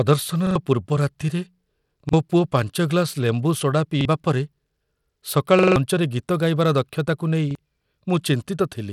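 Throughout, the speech carries plainly audible coding damage that likely comes from Bluetooth SBC compression at a low setting, around 96 kbps. Coarse sub-band quantisation leaves a gritty, aliased texture on the speech, and nothing is present above 17.2 kHz.

Five repeated buffers follow, each from new audio arriving late so the last 43 ms block, which fits a 2048-sample buffer, played again. At 0.47 to 0.56 s it repeats twice, losing around 100 ms. Single repeats at 2.09 to 2.13 s, 4.01 to 4.05 s and 7.51 to 7.55 s each lose about 40 ms. At 5.59 to 5.76 s four repeats swallow roughly 150 ms. Each one is heard as a hard-edged stutter.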